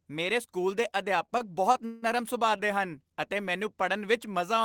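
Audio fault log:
1.25–2.04 s, repeated stalls (stutter): the jitter buffer keeps running dry here, four times, so the receiver stretches the last bit of sound to cover about 229 ms in total, the longest hold 162 ms. Nothing's lost, but roughly 29% of the stretch is filler, hence the dragging stutter.
2.57–2.61 s, short stall from a late packet: one packet shows up about 20 ms late, so the buffer empties and the last sound gets held for 20 ms before playback picks up exactly where it left off. Nothing's missing; you just hear a tiny hang.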